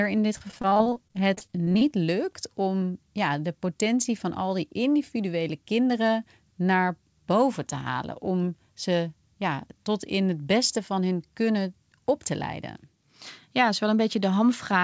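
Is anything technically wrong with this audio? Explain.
Yes. From 0.38 to 1.83 s, between "in dit" and "lukt om ja de", repeated packet loss produces robotic, choppy speech. Many short gaps, the longest 31 ms, are filled by extending the preceding sound, concealing about 30% of that span. The call path's band limit at 8 kHz, consistent with G.722, is also present.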